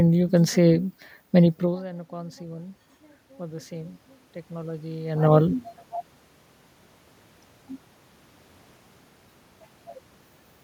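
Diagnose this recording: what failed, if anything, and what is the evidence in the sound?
The failure is automatic gain rising, in the call-processing stage. From 1.6 s to 5.7 s the voice and the room noise behind it swell together, slowly, by about 8 dB. The trigger is audible just before: the talker moves away around 1.5 s and the level at the microphone falls by about 19 dB. The gain control reads that drop as a quiet input and ramps its gain up over roughly four seconds, lifting the background along with the speech.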